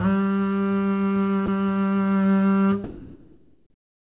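At 1.46 s the music drops out for about 20 ms, replaced by steady noise. From 2.84 s to the end, about 1.2 s becomes comfort noise, with about 0.44 s of music lost. The likely cause is sound dropped by the voice detector, which mistook the music for background.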